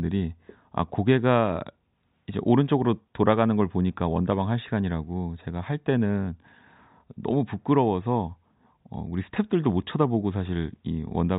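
The speech carries no audible technical faults.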